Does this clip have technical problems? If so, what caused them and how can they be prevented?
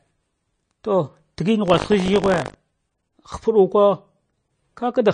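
Yes. Swirly, watery speech throughout, with a spectrogram cut-off at 9.5 kHz and flickering holes, points to likely MP3 compression at roughly 33 kbps. Encoding at a higher bitrate prevents it.

From 1.64 to 2.55 s, buffer tearing adds a 50 Hz robotic buzz. The waveform shows hard joins where small slices replay audio from about 70 ms earlier. Larger buffers and correct read/write pointer synchronisation prevent it.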